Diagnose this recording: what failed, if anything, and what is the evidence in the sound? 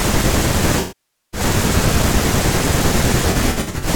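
AAC frame loss with concealment in the codec stage: from 0.79 to 1.40 s the speech smears and fades as the decoder stretches the last good spectrum over half a second, and from 3.31 to 3.88 s scattered short gaps, none much over 70 ms, leave noisy, phasey patches.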